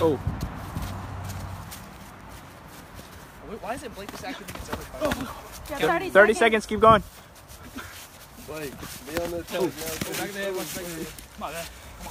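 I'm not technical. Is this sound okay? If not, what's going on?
Yes, the sound is okay: there are no technical problems to hear anywhere in this recording.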